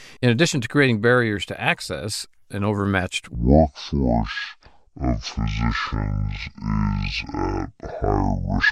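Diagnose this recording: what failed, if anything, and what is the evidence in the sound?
Section at the wrong speed, 3.35 s to the end: speech runs at 0.545 times speed, roughly ten semitones deeper, likely a playback clock mismatch.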